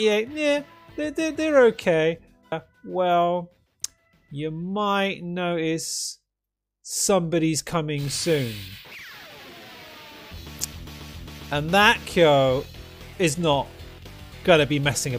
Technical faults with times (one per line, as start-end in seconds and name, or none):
2.51 stream segment skipped